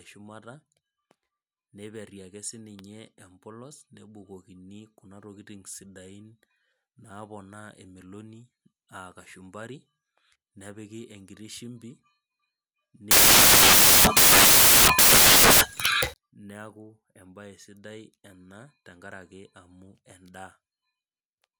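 At 13.11 s the speech collapses into loud, harsh broadband noise until 16.14 s: samples built from the wrong bytes, low-order bits misread as the big part of each value.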